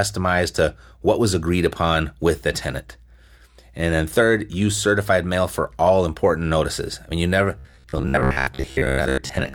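From 7.59 s to the end at 9.54 s, the speech collapses into a rigid metallic buzz near 66.7 Hz that still loosely tracks the words: robotic sound from repeated short buffers, likely caused by audio arriving too seldom, so about half the time is filled by repeating the last 15 ms.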